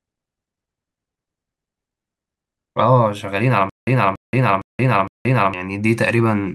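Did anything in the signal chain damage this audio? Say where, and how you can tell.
Yes, most likely at playback or stream buffering. From 3.70 to 5.54 s there is a stutter with silent gaps: a 284 ms burst repeats four times, each followed by 176 ms of digital silence, a steady 460 ms cycle. This is likely a stalled player re-serving its last fragment, so the underlying audio is lost.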